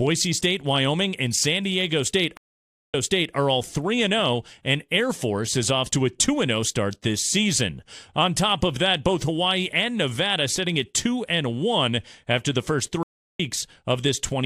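At 2.37 s the speech drops out for 558 ms, then jumps back 418 ms before "are all". After "after the first" at 13.03 s a 354 ms gap skips roughly a third of a second ahead. Both are stream reconnects, where the connection broke and a fresh decoder restarted mid-stream.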